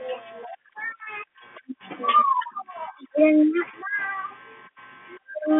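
Speech clip; no technical faults are present.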